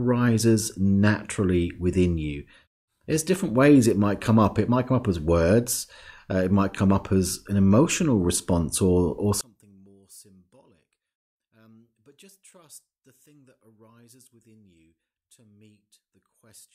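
A speech recording. From 9.41 s, right after "emotional response or or", the level falls by about 33 dB until the end of the clip. What remains is faint. The likely cause is one channel inverted, so the centred voice cancels when the channels are summed to mono.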